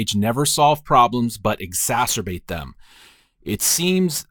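Crude rate conversion starts at 1.91 s and lasts to the end. Samples appear to be repeated without filtering, which fits a nearest-sample conversion from 44.1 kHz to 48 kHz. The resulting error, roughly 15 dB below the speech, adds a gritty, inharmonic fizz on louder, brighter sounds.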